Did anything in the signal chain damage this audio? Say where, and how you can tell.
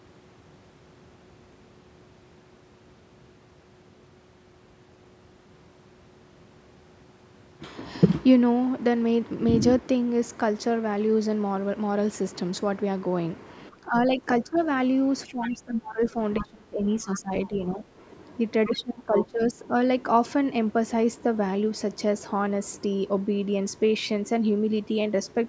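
Yes. The damage sits in the call processing stage, in the echo canceller. Speech is suppressed in double talk from 13.7 to 14.61 s, 15.26 to 17.85 s and 18.66 to 19.74 s. In these spans the talker's level sinks, by roughly 15 dB in the first span and about 20 dB in the later two, then recovers. The likely cause is two people talking at once. The canceller could not tell the near talker from loudspeaker echo, so it turned everything down.

The other side's voice leaks through at the same points. A faint second voice sits under the speech at 14.55 to 14.65 s, 15.43 to 15.51 s, 16.04 to 16.45 s and 17.12 to 17.45 s. These scraps are about 15 to 25 dB below the talker. From 18.65 to 19.53 s it is much stronger, only about 5 dB down. The device was likely playing the far end on a speaker, and the canceller did not fully subtract it from the microphone.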